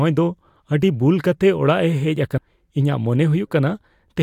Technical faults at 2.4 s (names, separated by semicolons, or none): damaged data in a compressed stream